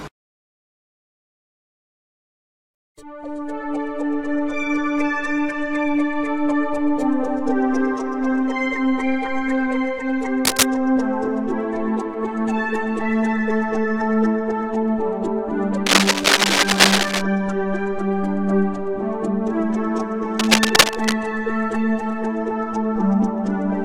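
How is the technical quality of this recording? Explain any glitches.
Three bursts of cable scratch noise break up the recording, at 10.45 to 10.63 s, 15.86 to 17.23 s and 20.38 to 21.14 s. Each is a dense, uneven scratching roughly 5 dB louder than the sound beneath it, likely from a worn cable or connector shifting and changing its contact resistance.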